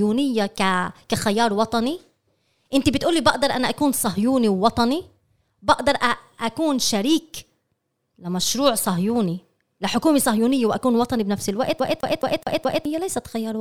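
From 11.80 to 12.85 s the speech hits a CD stuck on one turn. A scratch keeps sending the laser back one track. The same 0.21 s of sound repeats five times, with a brief mute at each jump. It makes a fast, even stutter.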